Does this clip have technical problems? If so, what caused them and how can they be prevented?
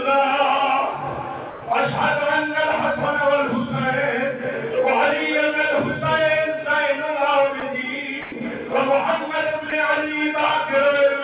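Yes. At 1.50–1.62 s, 7.60–7.62 s, 8.22–8.32 s and 9.70–9.72 s the sound drops out and is replaced by steady noise. This is likely sound dropped by the voice detector: the sender classed low-level sound as background and stopped transmitting, and the receiver filled each gap with comfort noise. The audio runs through a G.711 mu-law call path with nothing above 4 kHz. To prevent the dropouts, lower the voice detector's threshold and lengthen its hangover time, or disable discontinuous transmission.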